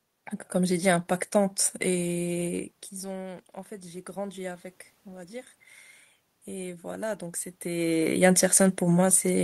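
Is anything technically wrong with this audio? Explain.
Yes, there's one fault: automatic gain rising, from 2.4 to 5.57 s. Around 2.5 s the talker seems to move away from the mic, and the level at the input drops by about 15 dB. The AGC reads that as the signal getting too quiet and slowly turns its gain up, by about 4 dB over those three seconds. You hear the voice and the room noise swell together, a gradual lift in the whole background.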